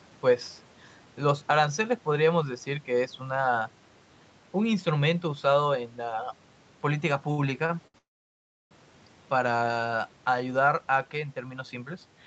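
Three times in quick succession a packet arrived late and the jitter buffer ran dry, producing a short stall from a late packet at 7.31 to 7.40 s, 7.66 to 7.71 s and 7.87 to 7.96 s. Each time the receiver held the last sound in place for roughly 67, 31 and 70 ms until the packet turned up, then resumed exactly where it left off. Nothing is lost, but the speech catches and drags with a slight buzz or dip each time.

Just after, from 7.98 to 8.73 s, comes a call audio freeze, likely caused by packets held up in transit long enough to empty the jitter buffer completely. The receiver carried the last sound forward briefly, then it faded, and about 680 ms of the roughly 0.73 s gap is silence. When the packets arrive, the speech picks up from where it stopped, so the sentence is pushed later rather than cut.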